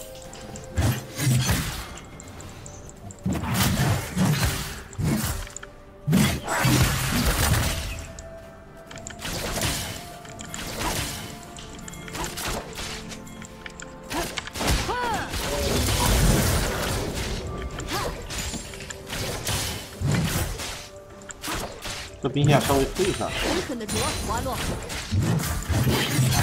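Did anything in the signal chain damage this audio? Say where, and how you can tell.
Yes, a doubled audio track. From 9.45 to 13.45 s, a dry copy trails about 1.5 s behind, about 5 dB quieter, cutting in and out abruptly. Likely a second, slower capture path.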